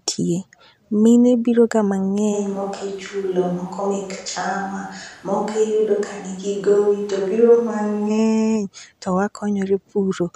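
A speech recording in which the close microphone's signal likely dropped out and the track fell back to a distant microphone from 2.34 s to 8.09 s. Across that stretch the voice turns roomy and hollow, with thinner bass, and room noise rises to roughly 30 dB below the speech. Loudness stays about the same, so the fault shows in tone rather than level. The switch into the distant pickup and the return at 8.09 s are both abrupt.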